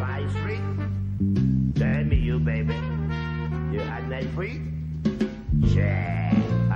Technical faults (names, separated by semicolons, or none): repeated frames